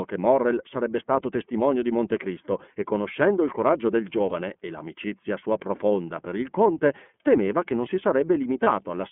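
Speech clip with a narrow, slightly rough and synthetic tone throughout and nothing above about 3.4 kHz or below 200 Hz. That is the iLBC codec, which codes each 30 ms frame on its own. The audible coarseness fits its 13.33 kbps mode. At 4.29 to 4.33 s, between "conoscendo il coraggio del" and "e l'amicizia sua profonda", and again at 8.63 to 8.68 s, the sound briefly turns into a held, faintly buzzy vowel-like tone. These are lost iLBC frames, each about 30 ms, where the decoder repeated the last pitch cycle mixed with noise. Because iLBC frames stand alone, the speech returns cleanly right after each gap.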